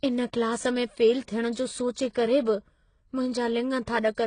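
Across the whole clip, the speech has nothing above 9.8 kHz and carries layered coding artefacts: artefacts from one codec heard together with another's. This is likely transcoding between lossy codecs, and the sound points to low-rate HE-AAC re-encoded as AAC-LC, which keeps the earlier damage and the lower cut-off.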